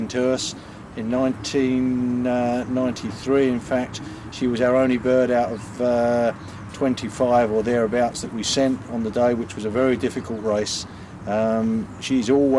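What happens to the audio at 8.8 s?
Nothing goes wrong at 8.8 s; the audio plays through that moment intact, with no dropout, click or other fault.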